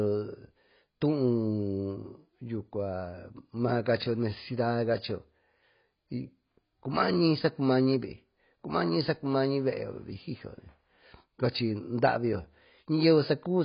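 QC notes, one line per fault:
Throughout: AAC compression; nothing above 5.1 kHz, so the speech sounds dull and smeared, with heavy codec damage, likely from AAC-LC at about 16 kbps.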